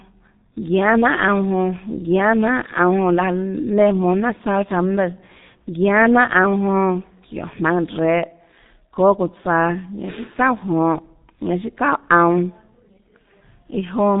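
A speech clip carrying heavy G.723.1 codec damage throughout: nothing reaches above 3.8 kHz, so the sound is muffled, and the slow 30 ms frame updates leave it hoarse with smeared consonants. That degree of coarseness points to a rate near 6.3 kbit/s.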